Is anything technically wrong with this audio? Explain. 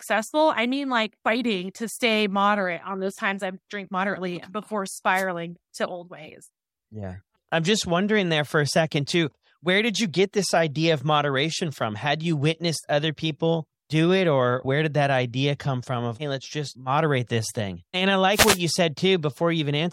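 Yes. The speech carries two wireless microphone noise hits. The first runs from 5.13 to 5.25 s, right after "I drink moderately before" and just ahead of "to old ways". The second runs from 18.32 to 18.60 s. In both, the FM radio link faded as reflected signals cancelled at the receiver, so receiver noise surged up through the audio as a short swish of static. On a spectrogram each shows as a broadband vertical smear of noise, and on the waveform as a brief ragged, fuzzy patch.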